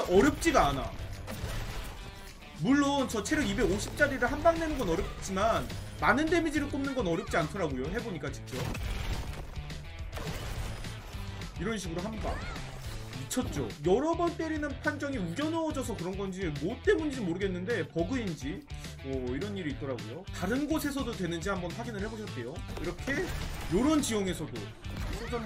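From 5.08 to 5.21 s, AAC frame loss with concealment leaves a brief smeared, noisy patch. About 85 ms, consistent with two dropped frames, is rebuilt from the last good spectrum. On a spectrogram, fine detail blurs into an even smudge there.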